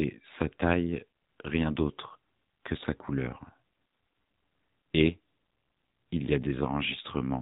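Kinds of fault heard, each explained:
AMR narrowband mobile codec: The speech has passed through the AMR-NB mobile codec, which fits a 7.4 kbps mode. Everything above 4 kHz is gone, so the sound is muffled and boxy. A vocal-tract model rebuilds each 20 ms frame from sparse pulses. The damage is plainly audible as a buzzy, synthetic edge.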